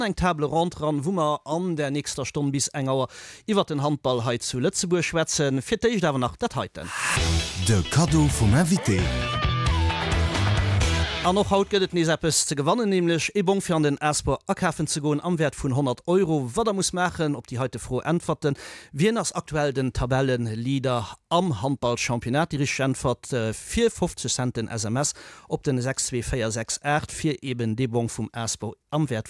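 No technical faults are audible anywhere in this audio.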